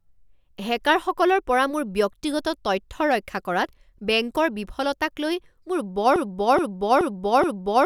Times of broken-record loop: 6.16-7.85

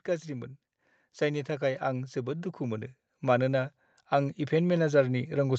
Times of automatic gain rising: 1.18-5.59

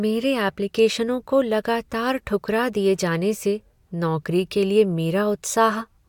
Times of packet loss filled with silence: none

